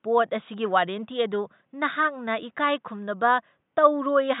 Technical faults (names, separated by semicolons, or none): none